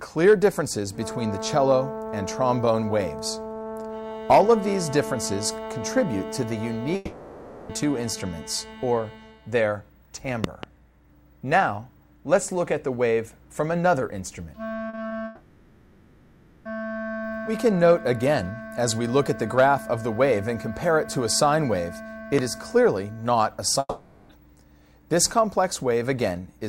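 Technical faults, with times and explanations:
6.95 to 7.71 s, long network dropout: about three quarters of a second of audio is lost, likely to a gap in the network stream. The receiver keeps stretching the last sound into a fading buzz instead of going quiet, then the audio picks back up with that stretch missing.
10.44 to 10.66 s, loud pop: two sharp pops in quick succession, roughly 15 dB above the surrounding sound, which carries on underneath. A sudden voltage spike from a plug, switch or driver hiccup is the likely cause.
14.89 to 15.13 s, short concealed packet loss: three small holes, 40 ms at 14.89 s, then 20 ms at 14.95 s and 15.09 s. The decoder papers over each by extending what came just before and blending back in, so you hear a quick smear or wobble rather than a clean gap.
15.25 to 16.67 s, long network dropout: the longest one, about 1.4 seconds gone, right after that cluster of small losses. 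Again the receiver fills it by continuing the last sound as a fading hiss or buzz, and the audio returns with that whole section missing.
22.39 s, loud pop: a single sharp pop, roughly 15 dB over the sound around it, with the audio continuing beneath. It's very short, the kind of transient you get from a static discharge or switching glitch, likely electrical rather than anything in the source.
23.79 to 24.31 s, long network dropout: about half a second missing, likely another network gap. The concealment drags out the last sound and lets it fade, leaving a brief near-silent moment of around 30 ms, before the audio resumes with the lost part skipped.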